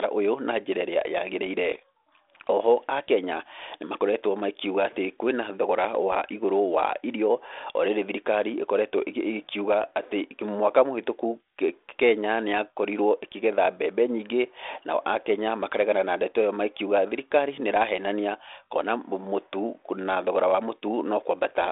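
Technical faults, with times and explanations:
No faults found: the speech occupies a telephone band of 300 Hz to 3.6 kHz with nothing above 3.8 kHz and only light coding texture, consistent with G.726 ADPCM working normally at 32 kbit/s.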